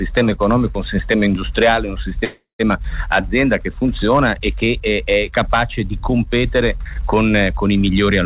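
Packets most likely stalled in transit and the jitter buffer ran dry, causing a call audio freeze from 2.24 to 2.61 s: the last sound is stretched into a fading buzz ending in about 0.13 s of silence, then resumes intact, about 0.35 s late, still band-limited to 4 kHz.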